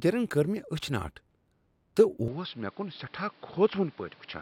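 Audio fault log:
2.28 s to end: input switched to a poorer device. With no gap, the speech abruptly loses everything above 5.5 kHz, turning dull, drops about 5 dB and gains a noise floor roughly 30 dB down. This is likely a switch to a narrower-band microphone.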